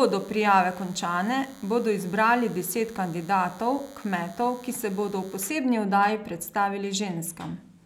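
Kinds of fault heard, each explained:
DECT cordless phone buzz: a thin, steady buzz at 100 Hz, rich in harmonics, sits well below the speech from 0 to 5.50 s. A nearby DECT handset or base station sends a radio burst every 10 ms, and the audio circuitry rectifies those bursts into sound.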